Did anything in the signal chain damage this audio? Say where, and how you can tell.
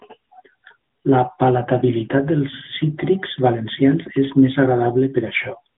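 Yes. Across the whole clip the speech sounds thin and boxed in, with nothing below about 150 Hz or above 3.6 kHz, and it has a clearly audible buzzy, synthetic edge. The damage happened at the codec stage, in an AMR narrowband mobile codec (AMR-NB). It samples at 8 kHz and rebuilds the voice from a vocal-tract model excited by a few pulses per 5 ms subframe. The artefact level fits a mid-rate mode of around 10 kbps.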